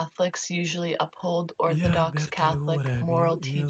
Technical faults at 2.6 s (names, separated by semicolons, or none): none